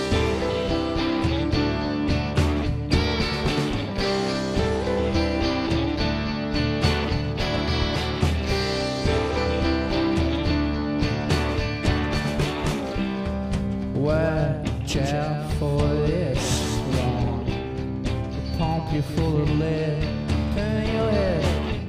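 No technical faults can be heard anywhere in this clip. The sound holds steady throughout, with nothing that points to a problem in how it was captured or delivered.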